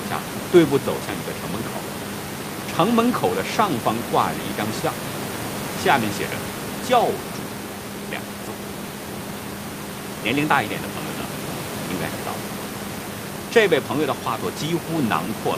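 No technical faults can be heard in the speech, and the room's own background noise sits about 12 dB beneath it.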